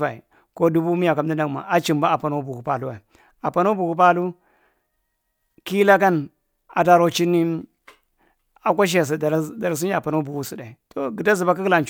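No technical faults can be heard anywhere in the speech recording; the signal runs continuously and evenly throughout.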